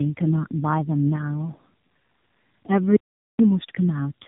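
A speech recording, narrow-band, with nothing above 3.8 kHz, and rougher and more warbly than a single low-rate mobile codec would leave it. That points to tandem speech coding: the sound fits an AMR-NB-style coder applied twice, with a telephone-grade link between, each pass re-coding the previous pass's damage. From 2.96 to 3.39 s, about 0.43 s, the audio drops out to silence. It is plain silence with no room tone, unlike a natural pause or concealed packet loss, and most likely comes from a lost input or link.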